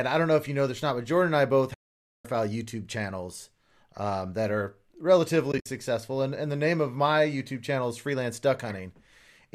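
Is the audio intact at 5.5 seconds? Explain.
No, not quite. From about 5.52 to 5.66 s there's AAC frame loss with muting: roughly 90 ms of audio drops out across that 140 ms stretch, with the longest gap around 70 ms. When frames go missing, the decoder zeroes their spectrum and the overlapping windows fade the speech out and back in, so you hear soft-edged holes. The gaps likely fit short low-delay AAC frames of about 10 ms each.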